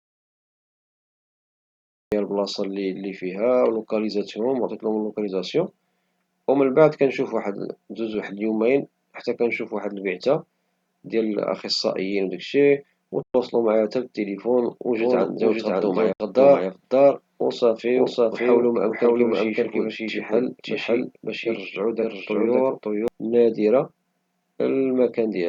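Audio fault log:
0.00 to 2.12 s, audio dropout to silence. The clip opens already cut out, with silence and no room tone until 2.12 s. The speech then comes in mid-flow. This points to an input that was likely disconnected or muted while the recorder kept writing silence. Whatever was said in that opening stretch is lost. Nothing of the signal leaks through the gap, so it is a true loss and not a quiet passage.
13.23 s and 16.13 s, Bluetooth dropout. At 13.23 s the speech vanishes for about 116 ms, and at 16.13 s it vanishes for about 70 ms. The speech resumes further along each time, as though it kept playing through the silence. That fits audio packets that likely missed their deadline on a wireless link and were discarded, roughly five packets in the first gap and three in the second.
15.00 to 23.08 s, doubled audio track. A second copy of the speech runs about half a second behind the first, at roughly the same level. 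It is full-band and dry, with no decay or room colour, so it sounds like an exact repeat and not an echo. It switches on abruptly at 15.00 s and off at 23.08 s. The likely cause is a second, slower capture path or two out-of-step copies left in the edit.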